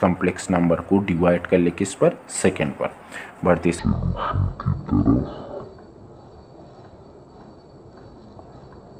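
From 3.79 s to the end, a section at the wrong speed plays at 0.51x, dropping pitch by about ten semitones, likely from resampling to a mismatched clock; spectrogram harmonics shift downward and crowd closer together.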